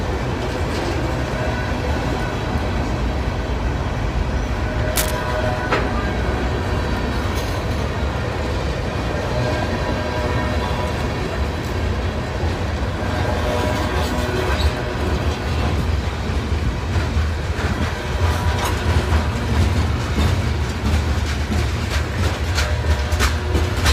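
Right around 4.96 s there's a short burst of cable scratch noise, lasting about 0.15 s until roughly 5.11 s. It comes across as a dense, ragged rustle sitting right on top of the sound, about as loud as the material itself, so it's hard to miss. The likely culprit is a worn cable or connector getting nudged, with its contact resistance jumping around and spraying those uneven noise bursts into the signal.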